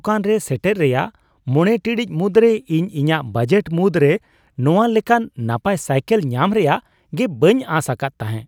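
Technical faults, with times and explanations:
No technical faults can be heard anywhere in the recording.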